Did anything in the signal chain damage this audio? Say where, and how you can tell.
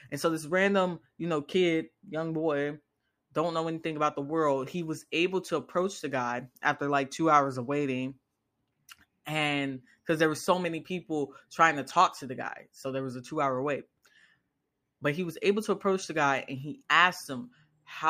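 No, nothing in this speech recording stood out on listening as a sign of damage at any stage of the chain.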